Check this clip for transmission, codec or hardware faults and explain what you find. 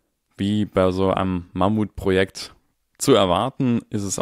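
No faults can be heard anywhere in this speech recording. There is nothing in it to place at a time or trace back to a cause.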